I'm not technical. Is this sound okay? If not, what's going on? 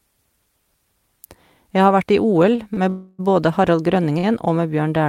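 No. There are two kinds of glitch in this speech.

Short stall from a late packet, at 2.55 to 2.60 s, 2.74 to 2.79 s and 4.19 to 4.25 s: the sound briefly hangs, held a fraction too long with a faint buzz or dip. Call audio travels in small chunks, and here a chunk showed up late. The receiving end stretched the last sound for about 25, 27 and 46 ms while it waited, then carried on from the same spot, so nothing is lost.

Call audio freeze, from 2.89 to 3.21 s: the sound stops moving forward for about 0.3 s and is replaced by a buzzy or hissy, fading continuation of the last sound, never dropping to full silence. The likely cause is that the audio chunks were held up on the way, so the receiver ran out of sound to play and filled the wait. Speech then resumes where it stopped, with nothing cut out, but it is now running a little later than before.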